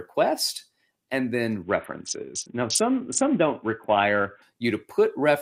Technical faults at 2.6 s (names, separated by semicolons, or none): Bluetooth SBC bit pool drop